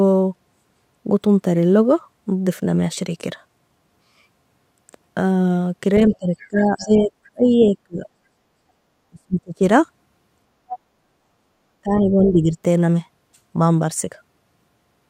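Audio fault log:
6.11 to 12.29 s, other side's voice leaking through: a second, fainter voice appears in short scraps at 6.11–6.47, 6.80–6.85, 7.45–7.78, 10.68–10.79 and 12.25–12.29 s. Most scraps sit roughly 20 to 30 dB under the main speech, and the one near 10.7 s is louder at about 15 dB down. This is likely loudspeaker sound that the echo canceller failed to remove. Unlike a dropout, it adds a separate talker rather than taking anything away.
6.17 to 12.57 s, speech suppressed in double talk: the main voice sinks in level while the far side is playing, at 6.17–8.06 s (about 1.5 s affected, dipping by about 25 dB at worst), 9.10–9.62 s (the deepest, about 35 dB), and 11.83–12.57 s (a milder dip of about 10 dB). The likely cause is an echo canceller that could not tell the two talkers apart and turned everything down. Here nothing is added, and the talker's own voice thins or gaps.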